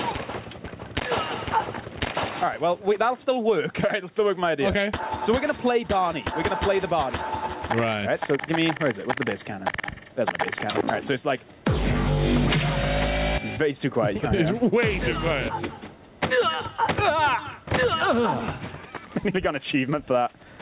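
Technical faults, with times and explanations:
throughout: gain pumping. Gain swings by roughly 15 dB, likely from excessive input gain clamped by a fast limiter.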